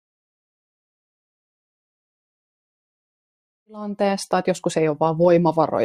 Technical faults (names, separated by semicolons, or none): none